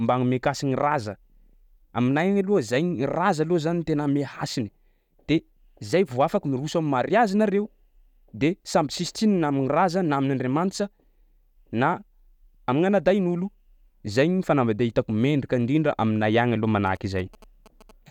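From 16.87 to 17.91 s, GSM signalling bursts break in under the speech: a galloping dit-dit-dit of brief buzzes repeating at about 217 Hz, sitting roughly 25 dB below the voice. A nearby 2G phone was exchanging short groups of radio bursts with the network, and the audio circuitry rectified that RF into a buzz. On a spectrogram this shows as clustered vertical stripes with a 217 Hz harmonic comb. The waveform shows regularly spaced spiky pulses.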